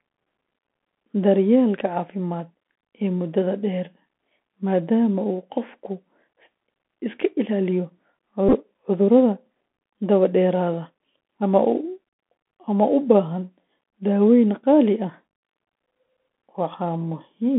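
The whole recording has passed through a Bluetooth CVSD headset codec, which sends one bit per sample saying only whether the waveform rises or falls, adapting its step size as it goes. The line carries roughly 200 Hz to 3.5 kHz, which fits the 64 kbps headset link. The damage is plainly audible: the speech sounds thin and boxed-in, s sounds come out scratchy, loud bright moments distort where they outrun the step, and a granular hiss sits beneath everything.

From 8.49 to 8.53 s, a Bluetooth headset packet repeated fault occurs. Voice packets between headset and phone went missing, and the chip decoded the previous packet's bits again in their place, about 30 ms of repeats scattered over 45 ms, which suggests around eight lost packets. The longest unbroken run is only about ten milliseconds, so instead of a sustained buzz there is a brief rough, stuttering burr near 267 Hz before clean packets resume.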